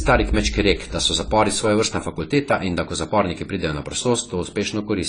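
Throughout, the speech carries AAC compression damage, likely from AAC-LC at a low bitrate, which fits around 24 kbps. A spectrogram shows nothing above 10 kHz and patchy, holed upper bands. It sounds dull and smeared, with warbling, fizzy sibilants.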